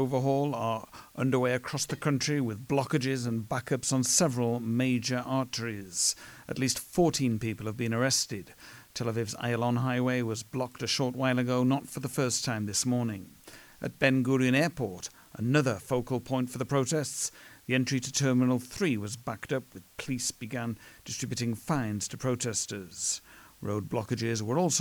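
A constant, even hiss sits under the speech from start to finish, roughly 30 dB below the speech level, with no grit or distortion on the speech itself. This is low bit depth with dither. The audio has been stored with very few bits, a noise floor that fits a word length of 9 bits, and dither was added before rounding, which turns the quantisation error into steady white noise instead of harsh distortion.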